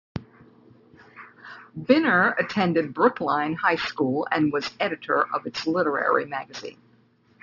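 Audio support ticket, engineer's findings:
Aliasing throughout the speech, whole clip. Sibilants gritty and metallic, with stray tones unrelated to the voice. Probable component: resampler lacking an anti-alias filter. Content above 6 kHz folds back below it, which points to a 12 kHz output rate. Spectrogram: energy running hard up to a 6 kHz ceiling, with mirrored, downward-sweeping traces where rising sibilant energy has folded, sitting roughly 20 dB below the speech.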